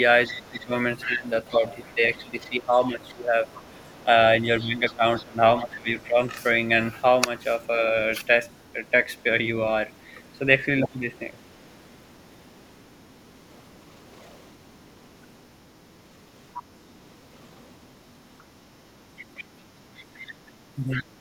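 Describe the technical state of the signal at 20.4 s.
The other side's voice is leaking through from 18.39 to 21.04 s, so at 20.4 s a second voice sits roughly 15 dB beneath the main speech. The likely cause is the talker's loudspeaker feeding the microphone, with the echo canceller leaving part of that playback in place.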